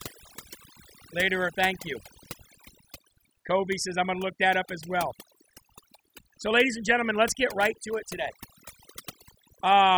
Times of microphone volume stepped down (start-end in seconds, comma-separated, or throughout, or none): none